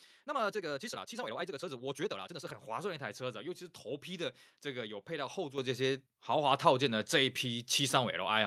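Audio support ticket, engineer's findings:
Abrupt level jumps at 5.58 s (about 8 dB) and 6.6 s (about 3 dB), speech and background noise rising together with no fade. Microphone volume stepped up: call software judged input too quiet, raised device input gain in single steps.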